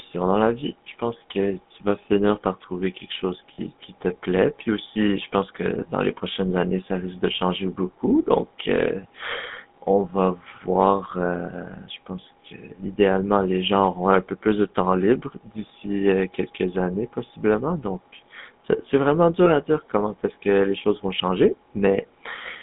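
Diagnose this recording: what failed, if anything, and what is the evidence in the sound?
The codec stage failed: the speech has passed through the GSM full-rate codec, and its damage is plainly audible. The band runs only from about 150 Hz to 3.6 kHz, and the voice carries the codec's buzzy, gravelly roughness, which fits the 13 kbit/s full-rate coder. The coder models the vocal tract and rebuilds the excitation from regularly spaced pulses that keep only every third sample, so fine detail in the voice is replaced by that grainy buzz.

A network or radio-link failure corrupted several GSM frames, and the decoder concealed each loss by repeating the last good frame's settings. Brief rough, metallic rings are heard at 3.54 to 3.60 s, 12.22 to 12.25 s and 19.44 to 19.52 s. The first hold lasts about 40 ms, which fits two lost 20 ms frames. The later two each fit one lost frame. All are too short to fade into silence.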